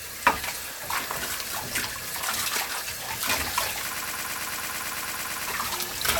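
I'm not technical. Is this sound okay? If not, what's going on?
No. From 3.97 to 5.48 seconds there is a broken-record loop. A tiny slice of sound, about 0.11 seconds long, repeats 14 times in a row. The player or stream likely froze and kept replaying its last piece, so the sound meant for that stretch is missing.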